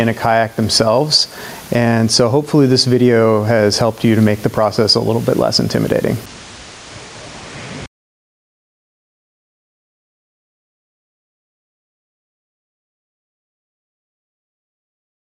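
Gain pumping runs through the whole clip. The level rises in the quieter gaps and is pulled back down each time a loud sound arrives, a swing of around 10 dB, so the background breathes up and ducks in step with the louder passages. Loud and soft parts sit closer together than they should, giving a squashed, compressed character. The likely cause is input gain set far too high for the microphone, with a fast limiter or compressor clamping down on every loud sound.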